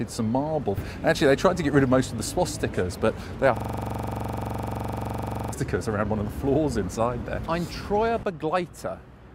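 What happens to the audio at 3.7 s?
The system hangs there, a system hang loop from 3.57 to 5.53 s. The driver stalls while the hardware keeps cycling one 42.67 ms stretch of its ring buffer, which fits a 2048-sample buffer. It repeats 46 times as a rasping 23.4 Hz buzz.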